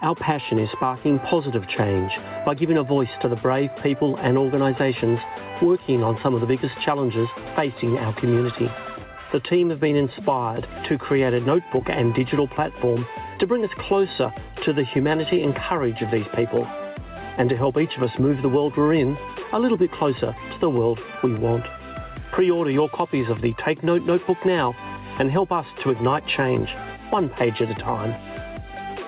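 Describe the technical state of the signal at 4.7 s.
At 4.7 s the signal shows gain pumping, which runs through the whole clip rather than starting or stopping there. The level swings by around 10 dB, so loud and soft passages sit close together. The likely cause is input gain set far too high, with a fast limiter or compressor pulling it back down on every peak. Nothing above 4 kHz is present, which fits a narrowband G.711-type call codec.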